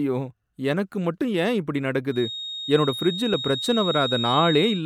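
At 1.34 s, between "எனக்கு மட்டும்" and "ஏன் இப்படி", an overlap between stream segments produces a tiny skip. Two segment time stamps collide and the player trims the shared span, dropping a few milliseconds of real speech so the waveform jumps.

From 2.08 s, right after "எனக்கு மட்டும் ஏன் இப்படி", to the end, a thin steady tone near 3.8 kHz sits roughly 10 dB below the speech, swelling and fading slowly in level. This is likely a feedback whistle: a loudspeaker-to-microphone loop held just at the edge of instability.

At 3.34 s the same segment overlap recurs, about 2 s after the first, matching a 2-second segment length. The trimmed join again removes a sliver of speech and leaves an audible skip under the whistle.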